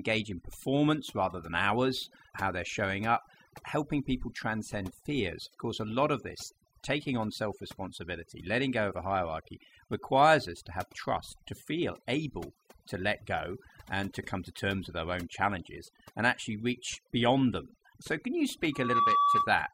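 Throughout, the background collapses to near silence with twinkling specks: overdone noise removal, with bands near the noise estimate cut too hard. From 18.72 to 19.59 s, just after "them so can you", a 1.2 kHz tone swells within a fraction of a second to a few decibels above the speech: loudspeaker feedback squeal, the microphone re-amplifying its own loudspeaker at that frequency.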